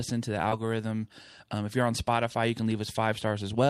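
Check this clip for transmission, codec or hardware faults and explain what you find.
Two packet-level faults overlap in this speech clip, both between 0.49 and 0.53 s.

Short concealed packet loss, 0.49 to 0.53 s: About 20 ms of audio failed to reach the decoder in time, and the receiver bridged the gap by extending the preceding sound before easing back into real audio. This leaves a brief smear or wobble where the sound momentarily blurs.

Lost packet rebuilt from error correction, 0.51 to 0.53 s: A 20 ms stretch, which fits a single lost packet, was recovered from a low-bitrate backup copy carried in the following packet. That recovered slice has no gap, but it sounds rougher and noisier than the surrounding audio.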